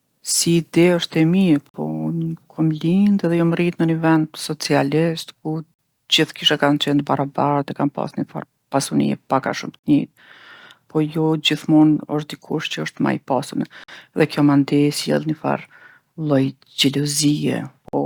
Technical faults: gap between chunks

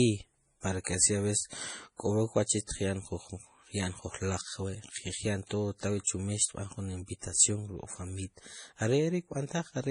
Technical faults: MP3 compression

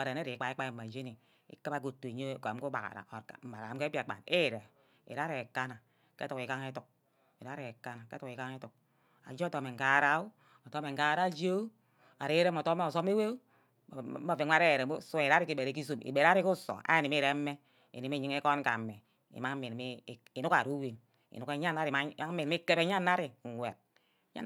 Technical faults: bit error spike

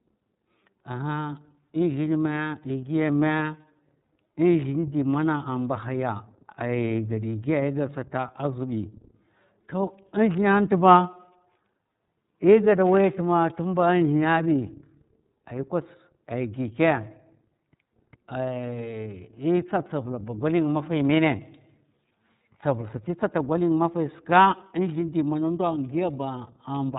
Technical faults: iLBC codec

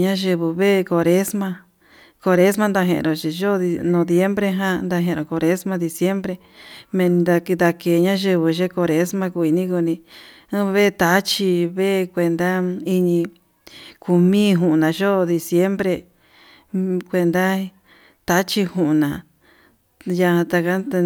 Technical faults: none

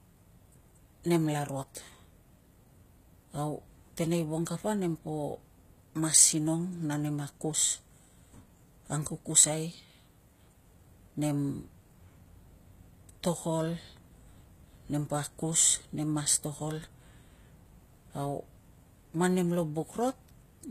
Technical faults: HE-AAC compression

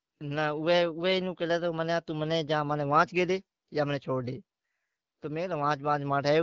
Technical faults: none

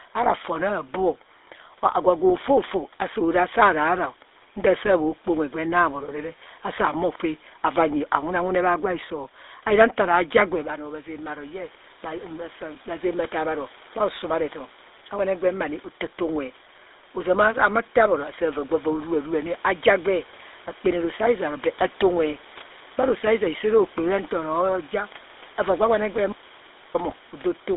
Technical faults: GSM full-rate codec; automatic gain rising; audio dropout to silence; GSM bit errors

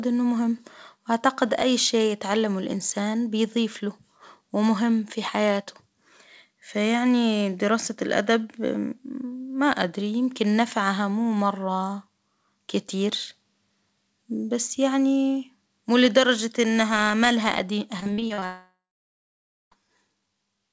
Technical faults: repeated packet loss (robotic sound); long network dropout

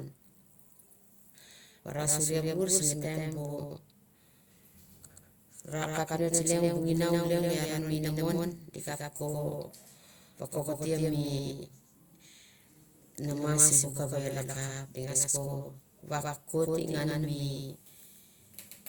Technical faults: doubled audio track

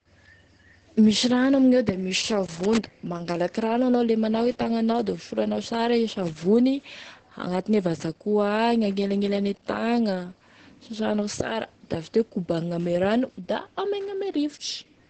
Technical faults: Opus voice compression; loose connector crackle

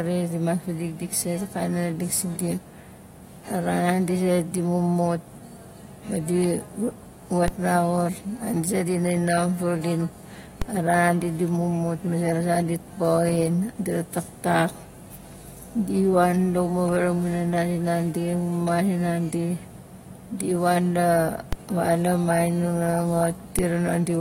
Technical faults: DC step

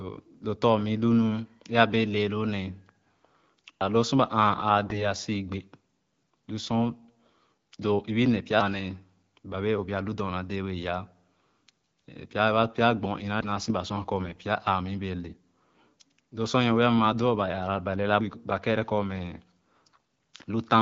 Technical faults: audio missing between chunks; AMR bit errors

